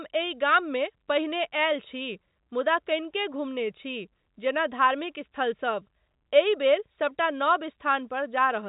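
No technical faults occur in this speech, which comes through G.711 telephone coding with nothing above 3.8 kHz.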